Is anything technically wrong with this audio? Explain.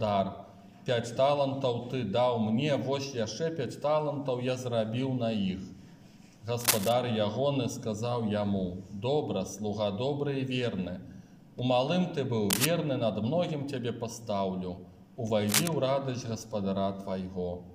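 Yes, there are three short bursts of cable scratch noise, at 6.6 to 6.9 s, 12.5 to 12.66 s and 15.48 to 15.68 s. Each is a dense, ragged crackle roughly as loud as the sound itself, likely from a worn cable or connector being moved while its contact resistance jumped around.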